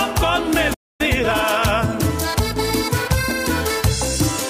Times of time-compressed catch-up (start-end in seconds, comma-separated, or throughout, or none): 1.01-1.51